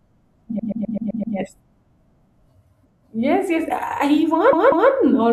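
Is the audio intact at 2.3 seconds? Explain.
Yes, at 2.3 seconds the speech plays through with no dropout, click, distortion or other audible fault.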